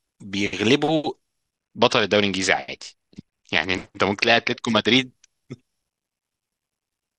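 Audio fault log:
1.56 to 4.97 s, Bluetooth SBC bit pool drop: the speech suddenly loses its top end and picks up a gritty, grainy haze for about three and a half seconds, then snaps back. The link looks to have choked, so the encoder cut its bit budget hard, which fits a fall from a bit pool of 31 to 8, around 66 kbps. The highest bands got starved and the rest were quantised coarsely, hence the dull, sandy sound until the rate recovered.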